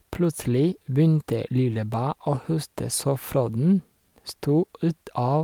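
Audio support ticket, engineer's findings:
Clock drift between sender and receiver, throughout the speech. Sender clock roughly 3% slow, so the jitter buffer keeps draining. Unlike random network jitter, the timing slips all lean one way and never recover, with no garbled packet-loss gaps.

Repeated timing corrections, 0.22 to 5.40 s. Receiver repeats short slices to stretch playback to 97% speed, adding about 150 ms overall. Heard, if at all, as slight hiccups and a slightly dragging tempo, unevenly spaced but always lengthening.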